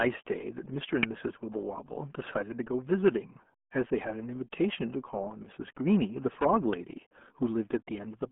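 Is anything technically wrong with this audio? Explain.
Yes, two problems can be heard in this speech clip.

Throughout, the audio carries the RealAudio 14.4 codec's signature. Nothing reaches above 3.7 kHz, and the low end is thinned below about 200 Hz, which fits an 8 kbit/s RealAudio 1 stream. The damage is heavy: the speech sounds muffled and gargly. A plain telephone-band filter would sound dull but smooth. This coder strips detail and rebuilds it coarsely, and that is what causes the bubbling.

At 1.03 s and again at 6.73 s there is an electrical switching spike: a sharp snap or tight cluster of clicks laid on top of the speech, lasting a few milliseconds or less. The likely cause is a nearby switch, motor or static discharge arcing, with the audio line picking up the burst. It differs from a digital dropout or edit click because nothing is missing underneath. The speech continues unbroken and the snap is simply added over it.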